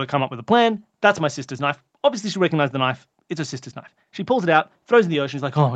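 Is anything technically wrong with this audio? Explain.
No, nothing stood out as a technical problem on listening to this speech.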